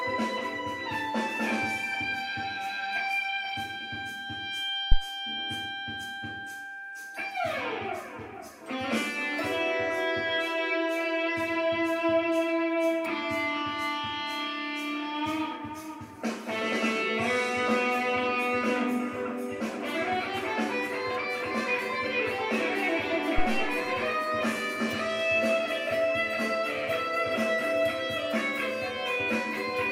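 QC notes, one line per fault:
4.92–4.97 s, phantom power thump: a deep, short thump peaking at about -6 dBFS and dying away within about 12 ms. A supply being switched on or off on the live input sends a voltage step through the coupling capacitors, which the input hears as a low-frequency pulse.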